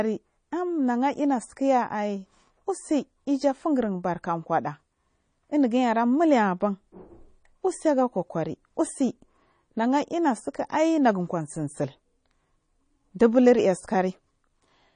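MP3 compression throughout likely cuts everything above 9.8 kHz and switches weak frequency lines on and off between frames, leaving the speech plainly watery and swirly.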